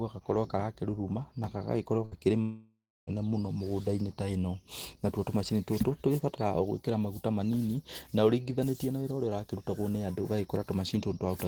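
At 2.05 s the speech breaks for about 90 ms, until 2.14 s. This is a burst of packet loss. A short run of audio never reached the player in time. The receiver covered the hole by stretching the last sound for about 60 ms and fading it down. It comes across as a brief held buzz or hiss. Speech then picks up slightly ahead, with about 60 ms simply gone.

A longer break runs from 2.41 s to 3.10 s. It is most likely a long network dropout, with the incoming stream stalling for well over half a second. The last sound is drawn out and fades, giving a smeared buzz or hiss that trails away. Near the end of the gap it gives way to about 270 ms of silence. Speech resumes at 3.10 s, but roughly 660 ms of it is missing.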